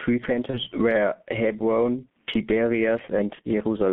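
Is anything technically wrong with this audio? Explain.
Yes. Three faults affect this speech clip.

Gain pumping runs through the whole clip. The swing is roughly 15 dB. Loud and quiet passages sit too close in level, so everything sounds squashed and breathing. The likely cause is input gain set far too high, with a fast limiter or compressor clamping down on every peak.

The G.723.1 codec is also present throughout. The band runs only from 150 Hz to 3.5 kHz. The heavy coding damage points to a very low bitrate near 6 kbit/s. This coder works on 30 ms frames and tracks the voice model slowly. The result is muffled, hoarse speech. Consonants smear together and lose their edges.

VoIP packet loss concealed by the speech codec occurs twice, from 0.50 to 0.61 s and from 3.35 to 3.41 s. Each event covers about 30 ms of missing audio, which fits a single lost frame. The decoder fills the hole by repeating its last pitch and filter at falling gain. 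You hear a buzzy tone or coloured noise that fades. Because each frame builds on the previous one, the speech stays weak or distorted for tens of milliseconds or more beyond the gap.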